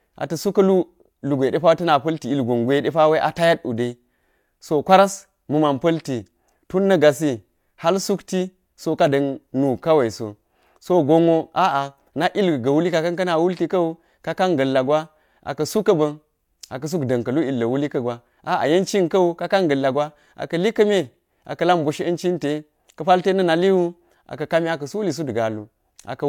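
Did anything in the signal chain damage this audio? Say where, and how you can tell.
No, nothing along the chain seems to have damaged this speech; I can't point to any stage where the signal was harmed.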